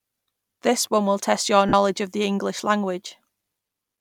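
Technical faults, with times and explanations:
1.68 to 1.73 s, lost LE Audio frames: Between "one will test your" and "of the", about 45 ms of audio goes missing, which fits six lost 7.5 ms frames. The LC3 decoder fills the gap by repeating the last spectrum with random signs, then fading it. The sound turns into a brief noisy smear that dips toward silence.
3.66 s, lost LE Audio frames: A single 7.5 ms frame drops out. The decoder conceals it by reusing the last spectrum with random signs.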